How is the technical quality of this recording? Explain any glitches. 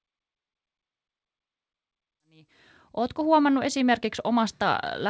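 Nothing stood out as a glitch on listening, with the opening fade-in settling by about 3.4 s and the call-codec sound topping out at 8 kHz both within what such a recording normally sounds like.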